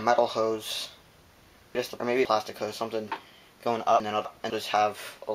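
Around 1.75 to 2.25 s, and again from 4.0 to 4.5 s, the sound jumbles briefly: half a second plays in the wrong sequence. These are chunks out of order. In each window, a 250 ms chunk arrived one chunk late and played after the one meant to follow it, so the two swap places. Nothing is missing, but each swap leaves three abrupt joins.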